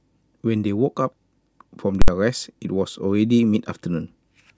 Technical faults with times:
2.02-2.08 invalid numbers at full scale

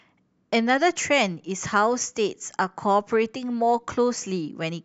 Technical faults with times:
none

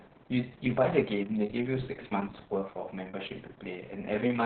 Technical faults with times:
0.00-4.46 Opus voice compression

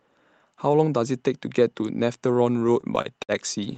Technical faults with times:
2.59-3.75 repeated stalls (stutter)

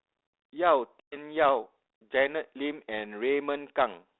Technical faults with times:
1.00-1.17 packet loss on an ADPCM call

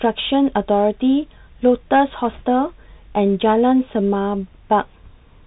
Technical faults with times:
0.00-5.47 Bluetooth CVSD headset codec
2.31-2.42 bit errors on a Bluetooth voice link

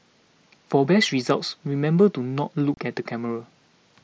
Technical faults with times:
2.74-2.77 unconcealed Bluetooth headset packet loss

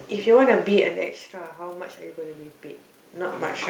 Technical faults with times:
1.56-3.69 automatic gain rising

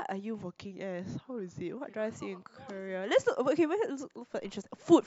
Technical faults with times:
0.41-1.77 drift correction step

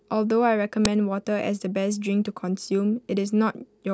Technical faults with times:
0.85 uninitialised buffer

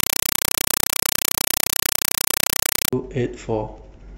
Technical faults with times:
0.00-2.93 compressed stream played as audio

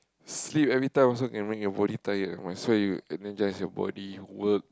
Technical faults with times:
none

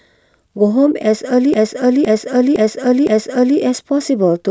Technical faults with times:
1.54-3.58 repeated buffer

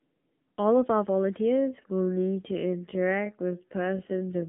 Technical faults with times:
0.00-4.49 AMR narrowband mobile codec
1.49-4.49 time-stretched section

